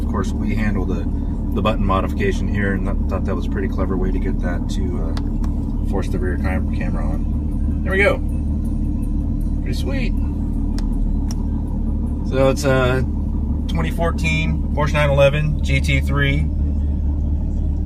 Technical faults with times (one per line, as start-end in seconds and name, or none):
none